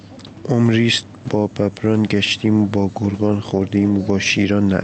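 Speech, with gain pumping throughout. The gain swings by roughly 5 dB. The likely cause is input gain set far too high, with a fast limiter clamping each peak. Dynamics sound squashed. The band stops near 8 kHz, which fits Opus at about 32 kbps.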